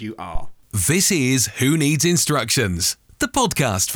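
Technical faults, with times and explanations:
0.35–0.58 s, phantom power thump: a supply voltage switched on or off on a live microphone input, and that sudden DC step pushed through the coupling capacitors into the speech path, producing a deep low thump peaking at about -10 dBFS that dies away within roughly 50 ms.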